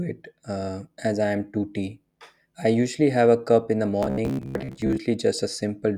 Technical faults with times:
4.03-5.03 robotic sound from repeated short buffers

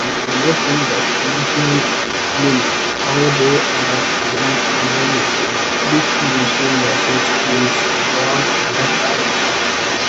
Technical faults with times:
0.00-10.08 other side's voice leaking through

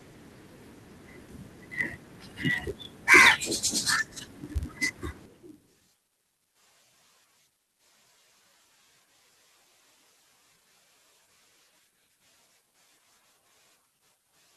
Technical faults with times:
0.00-14.57 block size mismatch (padded)
5.36-6.47 jitter buffer speed-up

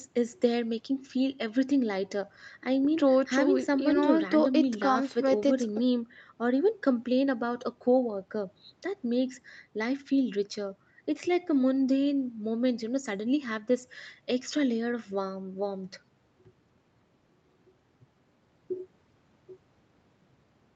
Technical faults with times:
none

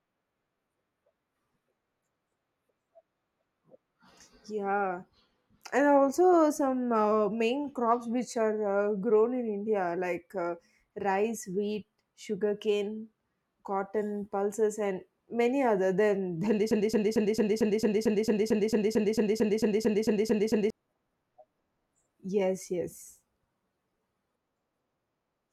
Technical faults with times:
16.71-20.70 broken-record loop

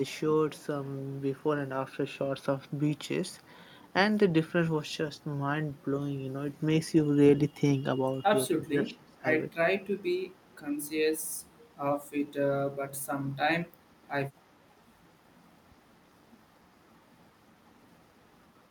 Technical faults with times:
8.55-9.25 speech suppressed in double talk
9.59-9.79 speech suppressed in double talk
10.02-10.60 echo leak
11.34-11.72 echo leak

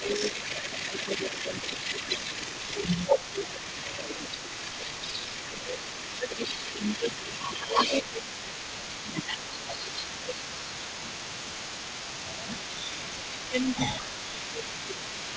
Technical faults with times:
0.00-2.24 speech suppressed in double talk
0.00-15.36 echo leak
3.30-4.04 speech suppressed in double talk
5.22-12.51 speech suppressed in double talk
13.49-15.36 speech suppressed in double talk

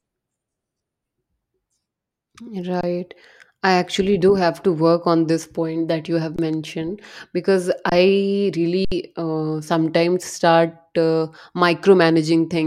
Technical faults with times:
2.81-2.83 underrun with held sample
6.36-6.39 underrun with held sample
7.89-7.92 underrun with held sample
8.85-8.92 underrun with held sample

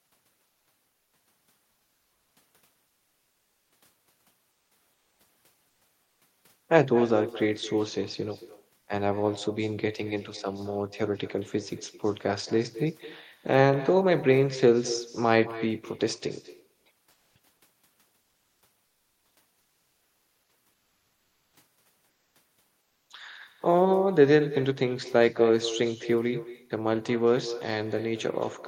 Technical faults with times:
0.00-28.67 echo with no canceller
4.51-5.19 comfort noise in place of the background
5.69-6.21 comfort noise in place of the background
16.73-17.35 comfort noise in place of the background
18.21-18.61 comfort noise in place of the background
20.73-21.53 comfort noise in place of the background
22.09-22.35 comfort noise in place of the background
22.81-23.09 comfort noise in place of the background

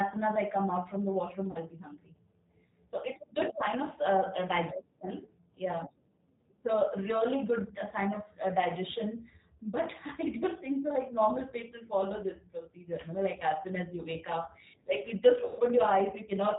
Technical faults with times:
0.00-16.59 G.729 codec
1.51-1.58 VoIP packet loss concealed by the speech codec
15.45-15.61 VoIP packet loss concealed by the speech codec

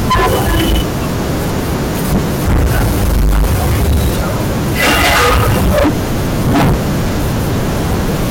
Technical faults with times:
0.00-8.30 hard clipping

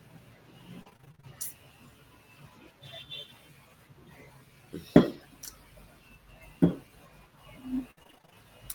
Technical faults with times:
0.81-1.25 repeated packet loss (robotic sound)
4.97-4.99 lost packet rebuilt from error correction
7.91-8.35 repeated packet loss (robotic sound)

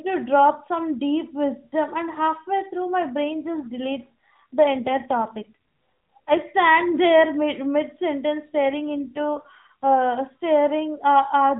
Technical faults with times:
3.24-6.40 AMR rate drop
8.54-9.97 AMR rate drop

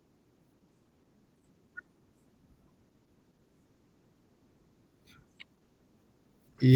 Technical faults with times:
0.00-6.76 Opus voice compression

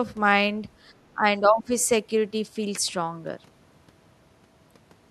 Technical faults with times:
1.14-1.71 speech suppressed in double talk

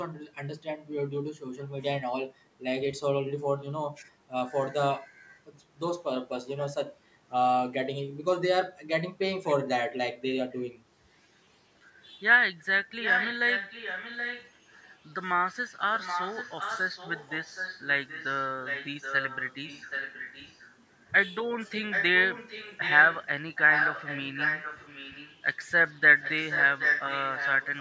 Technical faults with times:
13.02-14.51 echo leak
15.95-20.71 echo leak
21.90-23.24 echo leak
23.55-25.37 echo leak
26.21-27.80 echo leak

